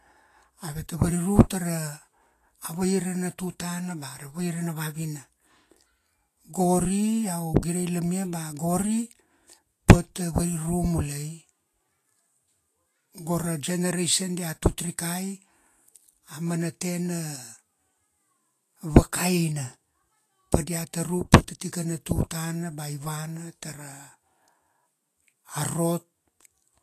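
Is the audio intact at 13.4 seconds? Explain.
No. Likely Vorbis compression, at a rate that sounds near 33 kbps, runs through the whole clip, coarsening the treble: nothing above 14.2 kHz, with hissy, grainy detail and blurred attacks.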